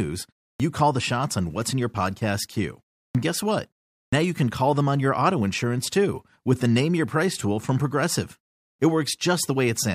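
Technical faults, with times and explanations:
0.54, 3.09, 4.07 and 8.73 s, clipped start after a pause: each time the sound resumes after a gap of 0.3 to 0.4 s, the first 55 to 65 ms go missing, so "call the shots on", "guess what" and "you can call them" jump in without their opening sounds. The output device dozes off during those short silences and takes a moment to wake back up, swallowing the start of whatever comes next.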